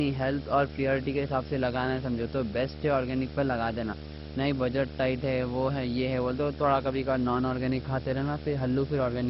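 Speech runs the full clip under a video or display buzz at 75 Hz, roughly 10 dB below the voice, which a spectrogram shows as steady horizontal lines at 75 Hz and its harmonics. The speech also sounds dull and gurglingly granular, with nothing above 5.6 kHz. That points to likely heavy MP2 compression at a low bitrate, perhaps 32 kbps, which a spectrogram shows as a hard ceiling with flickering high-frequency blocks.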